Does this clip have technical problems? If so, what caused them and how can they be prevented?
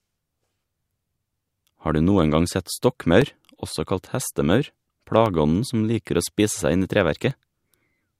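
Yes. Evenly spaced ticks cut into the speech every 1.02 s from 0.15 s to 7.31 s, about seven in all. These are periodic USB or driver dropouts: something stalls the audio path at a fixed interval, and about a millisecond is replaced by silence each time. Prevent it by finding and disabling the recurring background task that polls the USB bus, or by enlarging the audio buffer.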